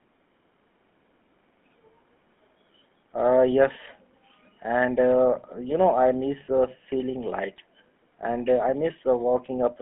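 From start to finish the speech sounds buzzy and gravelly, confined to roughly 200 Hz to 3.4 kHz. This is GSM full-rate codec damage, pulse-driven vocal-tract modelling consistent with about 13 kbps.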